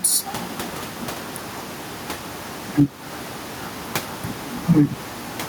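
Gain pumping runs through the whole recording, likely from input gain set far too high for the microphone, with a fast limiter or compressor clamping it back down on every loud syllable. The level swings by around 5 dB, and the room noise sits about 28 dB below the speech. Louder and quieter passages are pressed together, giving the speech a flattened, squashed feel.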